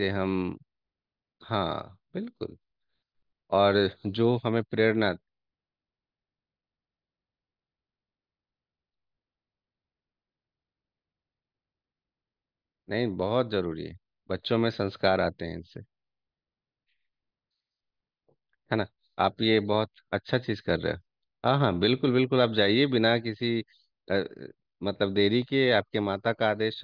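No technical faults are audible anywhere in the recording.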